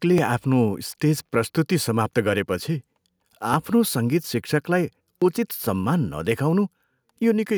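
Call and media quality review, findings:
Clock drift buffer slips: regular click/pop in speech, 0.18 to 6.89 s, every 1.68 s, about five events. Likely cause is two unsynced device clocks, off by roughly 700 ppm, so the buffer periodically drops or repeats roughly 70 samples. Waveform: discontinuities at even spacing. Spectrogram: thin full-band vertical lines on that 1.68 s grid.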